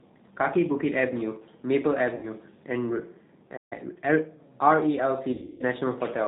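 The whole speech clip runs through the G.729 codec at 8 kbit/s. Its damage is plainly audible. Nothing above 4 kHz survives. The voice is rebuilt from a filter, a pitch predictor and a few pulses per frame, so it sounds rough and slightly synthetic.

At 2.15 s comes VoIP packet loss concealed by the speech codec, lasting until 2.27 s. About 80 ms of audio is missing, which fits four 20 ms packets. The decoder repeats its last pitch and filter at falling gain. The sound is stretched into a tone or coloured noise that fades, then recovers weakly.

From 3.56 to 3.73 s there is a playback stall. The sound stops mid-flow for about 143 ms, then resumes. The likely cause is the player running short of data or being blocked.

A time-compressed catch-up follows from 3.73 to 4.29 s. The player trims its backlog by cutting and cross-fading small pieces. The audio runs at 1.25 times speed. It sounds hurried at normal pitch.

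The second packet loss spans 5.31 to 5.63 s. About 260 ms is lost, scattered over 280 ms, with a longest run of 160 ms. That fits about thirteen 20 ms packets. The voice breaks into stretched, fading tone or noise and stays distorted for tens of milliseconds after the gap.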